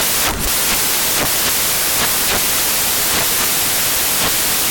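Speech runs the whole clip under loud white noise from samples built from the wrong bytes: the reader assembles each sample misaligned or byte-swapped, so rapidly changing low bits dominate. Unlike ordinary hiss, the noise follows the signal.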